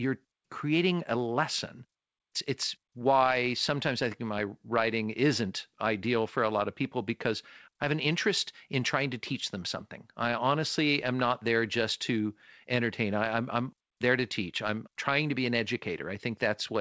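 No technical faults are audible.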